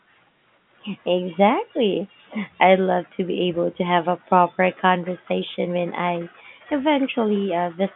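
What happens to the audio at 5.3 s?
Nothing goes wrong at 5.3 s: the audio is intact there, carried through the telephone-band G.711 coding with its usual narrow line band of roughly 150 Hz to 3.5 kHz.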